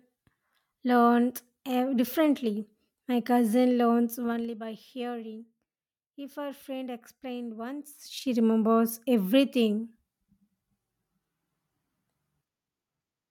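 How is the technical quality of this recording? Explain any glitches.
The recording has two bursts of zipper noise where the level is moved. The gain changes in unsmoothed 2 dB jumps, around twenty per second, and each jump leaves a small click. From 4.17 to 4.55 s, between "cousin learns" and "by hearing", the level drops by about 15 dB under a fine ticking rasp. From 7.85 to 8.34 s, after "her friend explained" and before "remembers everything", it climbs back by about 15 dB with the same zipping.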